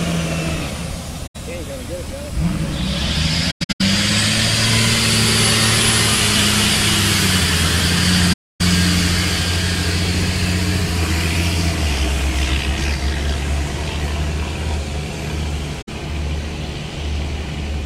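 AAC frame loss with muting at 1.27–1.36, 3.50–3.81 (broken gaps, longest about a tenth of a second), 8.33–8.61 and 15.81–15.89 s. The decoder zeroes lost frames, leaving soft-faded silent holes. These show as blank full-band spectrogram columns with tapered waveform edges.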